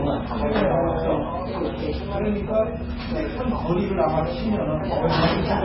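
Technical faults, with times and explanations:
Throughout, MP3 compression: the audio is likely MP3-encoded at a very low bitrate, the heavy damage fitting something near 16 kbps. With so few bits, the encoder has cut everything above about 5.5 kHz, leaving the sound dull and boxed in. Weak frequency lines are being dropped and restored from frame to frame, which gives a watery, swirling texture, with metallic chirps on bright detail and smeared attacks.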